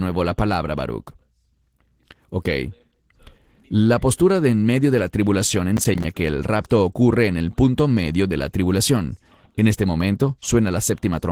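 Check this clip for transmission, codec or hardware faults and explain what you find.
Two faults are present: codec damage across the whole speech clip, and one short burst of crackle near the middle.

Opus voice compression runs throughout. The hybrid coding pairs a linear-prediction layer below 8 kHz with a transform layer above, and the band extends to about 20.2 kHz. The coarse excitation coding, consistent with roughly 16 kbps in 20 ms frames, leaves speech audibly hoarse and slightly robotic.

Processor overload crackle occurs from 5.77 to 6.04 s, between "medio de la tribulación" and "que el rapto ocurre". About seven buffers missed their deadlines in close succession, each dropping to silence with hard edges. This fits buffers of around 10 ms and produces a brief gritty tearing over the speech.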